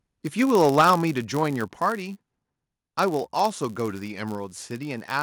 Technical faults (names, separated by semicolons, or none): block size mismatch (padded); microphone overload; microphone volume stepped down